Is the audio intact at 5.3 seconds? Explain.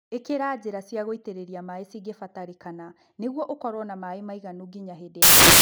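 No. At 5.3 seconds the speech is replaced by samples built from the wrong bytes, a fault that runs from 5.22 s to the end of the clip at 5.62 s. The reader assembles each sample from misaligned or swapped bytes. The rapidly changing low-order bits end up as the most significant part of every value. What you hear is loud, harsh broadband noise.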